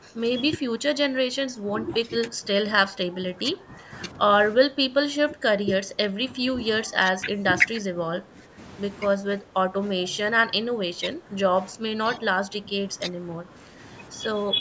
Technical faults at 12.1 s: speech suppressed in double talk

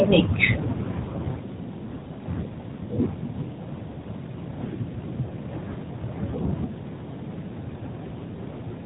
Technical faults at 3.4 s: none

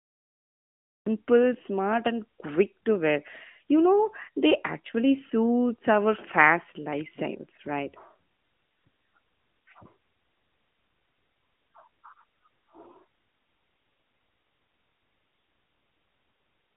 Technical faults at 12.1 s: AMR narrowband mobile codec

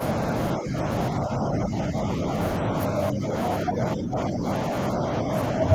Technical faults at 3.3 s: speech suppressed in double talk

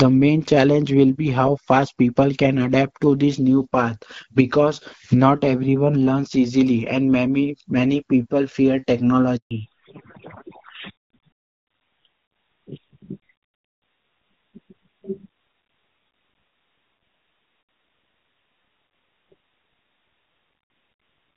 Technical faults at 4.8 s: none

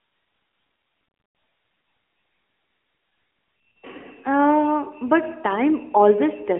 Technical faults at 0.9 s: AMR narrowband mobile codec

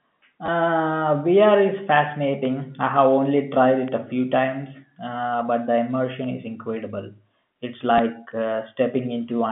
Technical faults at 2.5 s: bit error spike

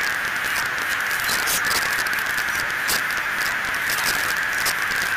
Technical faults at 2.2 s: integer overflow

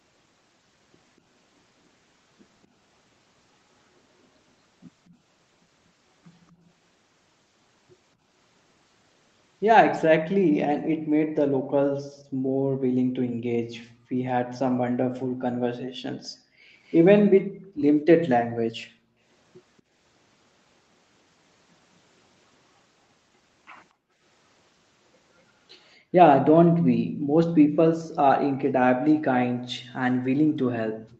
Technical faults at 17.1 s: background gated by the echo canceller; echo leak

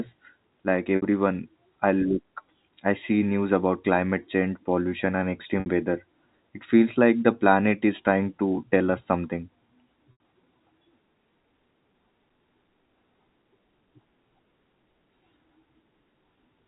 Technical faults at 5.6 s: packet loss with pitch repetition

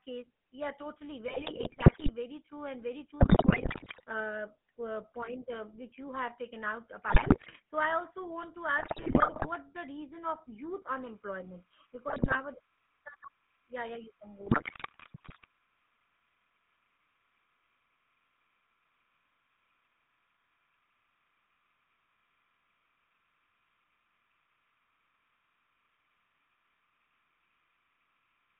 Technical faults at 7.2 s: GSM full-rate codec; GSM bit errors

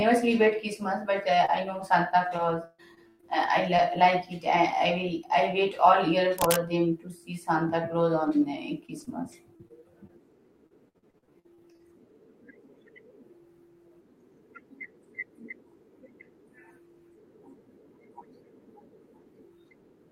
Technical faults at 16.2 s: none

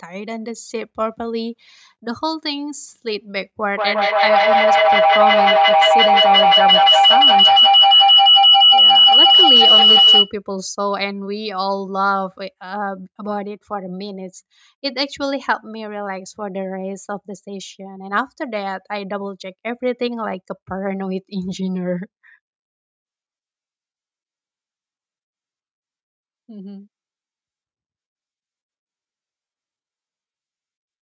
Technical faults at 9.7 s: feedback howl

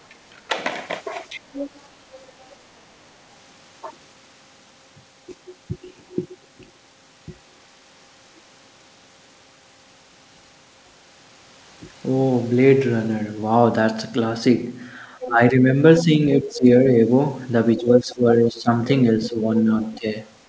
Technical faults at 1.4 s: speech suppressed in double talk

